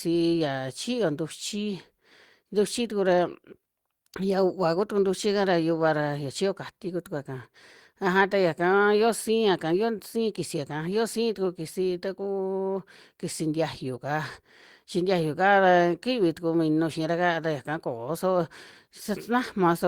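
Nothing goes wrong anywhere in this bit of speech, so there's simply nothing here to point out or pin to a moment.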